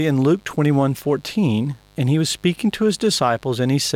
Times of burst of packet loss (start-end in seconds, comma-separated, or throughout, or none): none